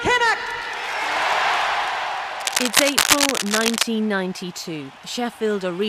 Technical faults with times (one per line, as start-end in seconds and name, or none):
2.40-3.84 cable scratch noise